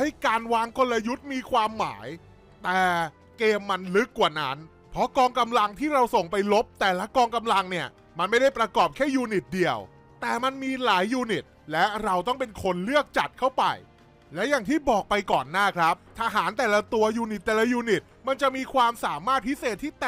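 No technical faults can be heard anywhere in the audio. Nothing in it needs a time or a cause.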